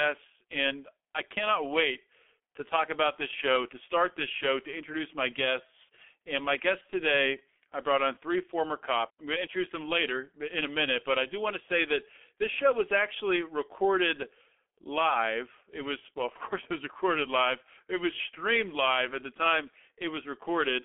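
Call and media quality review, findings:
G.723.1 codec, whole clip. Low-rate telephony codec in the path, consistent with its 6.3 kbit/s mode. Heavy coding damage: 30 ms frames, slow-updating voice model smearing consonant onsets, hoarse buzzy texture. Line band roughly 250 Hz to 3.4 kHz, no energy above 3.8 kHz. Speech muffled, thin low end, blurred fricatives throughout.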